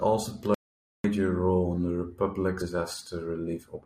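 At 0.54 s the speech cuts out into an audio dropout to silence. The gap lasts about half a second and ends at 1.04 s, just before "role in the". The silence is total, with no room tone underneath. Whatever was said there is lost. The likely cause is a brief loss of the input signal, such as a disconnect or a mute, while the recorder kept writing silence.

At 2.60 s the speech jumps forward. This is compressed frames skipped: the decoder never played a run of encoded frames. About 150 ms of speech is missing. That fits roughly seven frames of about 23 ms each.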